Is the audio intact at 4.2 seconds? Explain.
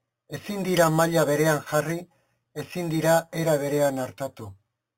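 No. At 4.2 seconds, as throughout the clip, the speech carries imaging from sample-and-hold upsampling. Each sample of an 8 kHz signal was repeated up to 48 kHz without smoothing, leaving a mirrored copy about 16 dB down between 4 kHz and 8 kHz. It sounds like a bright metallic fizz that tracks the speech. On a spectrogram that band mirrors the harmonics, sloping opposite to pitch, and the waveform looks stair-stepped.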